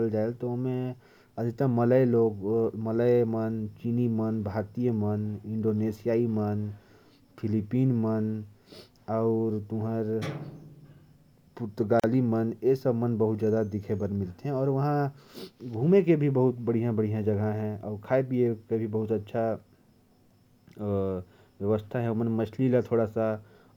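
At 12.00 s the speech drops out for about 40 ms, resuming at 12.04 s. This is a gap at a join of encoded pieces. The audio was encoded in separate sections and then spliced without trimming. The encoder's start-up silence and its padded final frame were both kept at the seam. The result is a brief hole with smeared edges. The speech then picks up exactly where it left off.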